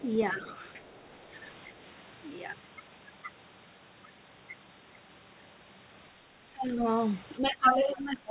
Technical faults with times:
0.00-0.04 other side's voice leaking through
0.32-0.50 speech suppressed in double talk
0.49-0.91 other side's voice leaking through
6.52-6.85 speech suppressed in double talk
7.38-8.30 speech suppressed in double talk

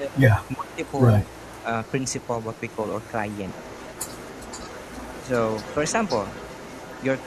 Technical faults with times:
0.00-0.23 speech suppressed in double talk
0.32-7.26 echo leak
0.55-0.84 speech suppressed in double talk
1.64-1.69 speech suppressed in double talk

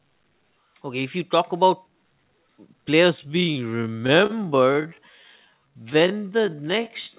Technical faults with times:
3.15-7.18 time-stretched section
4.07-4.31 short stall from a late packet

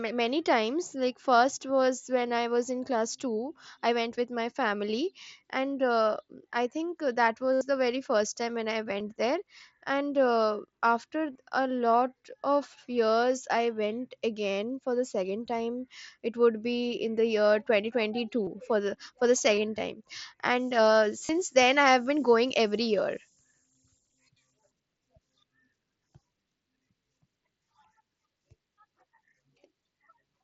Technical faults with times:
7.53-7.61 concealed Bluetooth headset packet loss
9.00 concealed Bluetooth headset packet loss
11.33-11.35 concealed Bluetooth headset packet loss
18.45-18.47 concealed Bluetooth headset packet loss
19.56 concealed Bluetooth headset packet loss
21.26-21.29 concealed Bluetooth headset packet loss

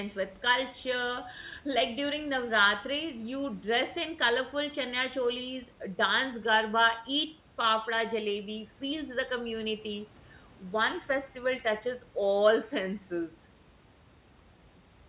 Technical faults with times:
none

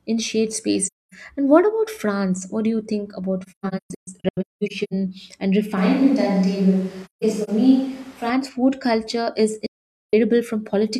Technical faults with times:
0.87-1.14 AAC frame loss with muting
3.42-4.93 AAC frame loss with muting
5.77-8.30 switch to a distant microphone
7.05-7.49 AAC frame loss with muting
9.66-10.14 AAC frame loss with muting

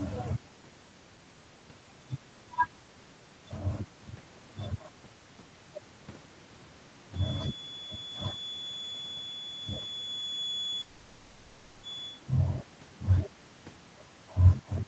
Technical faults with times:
7.10-12.23 feedback whistle
10.81-11.85 long network dropout

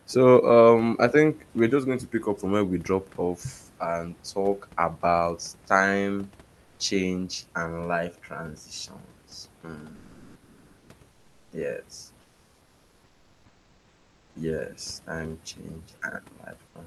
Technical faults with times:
6.63-6.79 comfort noise in place of the background
9.61 sound dropped by the voice detector
9.95-11.51 comfort noise in place of the background
12.21-14.35 comfort noise in place of the background
16.67-16.75 comfort noise in place of the background

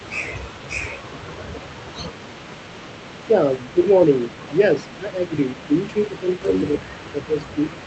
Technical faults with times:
0.00-7.86 echo leak
3.27-3.34 speech suppressed in double talk
3.71-4.51 speech suppressed in double talk
4.83-5.31 speech suppressed in double talk
5.67-6.45 speech suppressed in double talk
6.76-7.86 speech suppressed in double talk

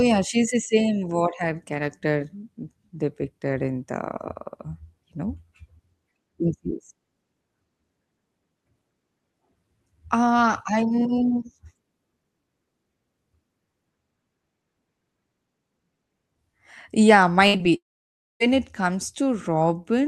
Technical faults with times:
17.47-17.55 burst of packet loss
17.57-17.66 short concealed packet loss
17.76-18.42 long network dropout

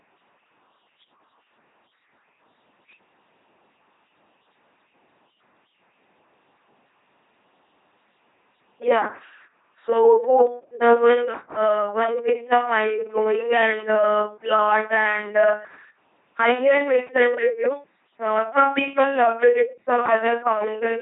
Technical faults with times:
0.00-21.02 LPC-10 vocoder

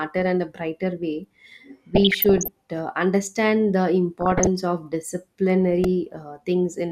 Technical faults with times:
1.95-2.48 DAB burbling
4.21-4.47 DAB burbling
5.84 repeated buffer

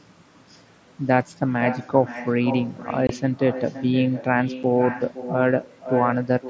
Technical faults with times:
0.00-6.49 echo with no canceller
3.07-3.10 unconcealed Bluetooth headset packet loss
4.63 unconcealed Bluetooth headset packet loss

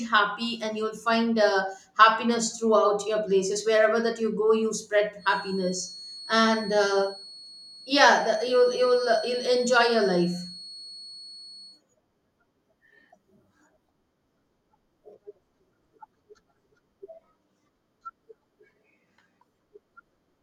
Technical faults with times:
5.16-11.83 feedback whistle

